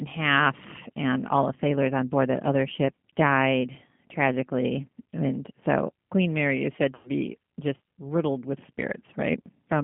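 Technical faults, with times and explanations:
Throughout: G.729 codec. The audio is squeezed into a phone band of roughly 150 Hz to 3.4 kHz, with plainly audible rough, synthetic coloring. This fits an 8 kbit/s G.729A stream.
1.54–1.57 s and 6.95–7.10 s: VoIP packet loss concealed by the speech codec. There's a brief smear after "half and all the", and a longer fading one after "is said". The decoder stretches the last frame over about 20 ms and then about 100 ms of missing audio.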